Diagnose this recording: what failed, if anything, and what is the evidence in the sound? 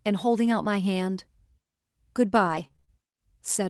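At 0.45 s there is a brief rough, noisier patch lasting about 20 ms, with no dropout. This is a lost packet rebuilt from error correction at the network and codec stage. The sound fits a single lost packet whose low-bitrate copy, carried in the next packet, was decoded in its place. On a spectrogram it shows as a thin slice of smeared, grainier harmonics. The waveform stays continuous, with no flat gap.

From 2.47 to 2.90 s the sound turns choppy. This is repeated packet loss (robotic sound) in the network and jitter-buffer stage. Five separate gaps occur, the longest 31 ms. About 100 ms of audio is missing, and 122 ms is filled by stretching the preceding sound, so concealment covers 29% of the span. On a spectrogram, stripes of frozen, repeated harmonics alternate with real speech. The waveform shows repeated, cloned cycles.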